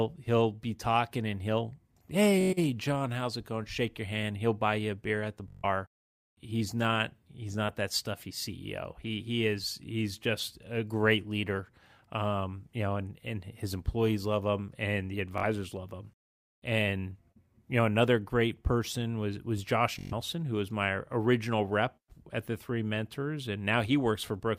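Speech with four bursts of Bluetooth stutter, at 2.41–2.54 s, 5.48–5.64 s (after "a beer at the"), 15.38–15.43 s (between "love him and the" and "love him") and 19.99–20.13 s (before "who was"). Late or missing packets made the receiver replay a slice of about 21 ms, heard as a buzzing machine-gun repeat lasting 43 to 149 ms. Speech then jumps ahead. On a waveform, each gap is an identical repeating block, and on a spectrogram it is evenly spaced vertical stripes.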